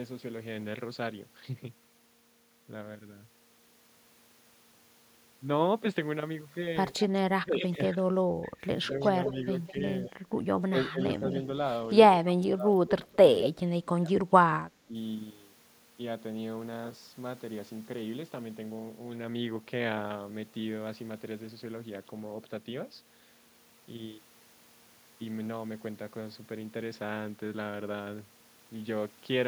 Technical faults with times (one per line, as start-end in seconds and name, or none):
6.98-7.04 echo leak
7.35-11.25 speech suppressed in double talk
9.02-10.61 echo leak
12.24-14.21 speech suppressed in double talk
12.28-12.33 echo leak
12.88-13.49 echo leak
14.86-14.95 speech suppressed in double talk